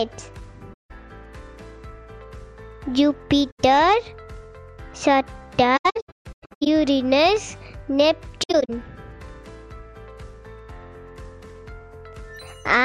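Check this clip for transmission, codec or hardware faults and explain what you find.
There's AAC frame loss with muting, four times: 0.73–0.91 s, 3.50–3.60 s, 5.76–6.67 s (scattered gaps, longest about 150 ms) and 8.43–8.70 s. Lost frames were decoded as silence, and the overlapping windows fade each hole out and back in softly.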